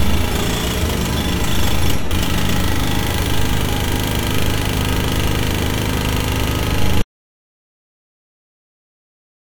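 A recording of everyday sounds with two faults. At 2.10 s the sound jumps ahead by roughly 40 ms. These are compressed frames skipped: about two 21.3 ms frames were missing or rejected by the decoder. From 7.02 s to the end the sound cuts out into silence with no background tone at all. This is an audio dropout to silence, likely caused by the input being lost while the recorder kept writing silence.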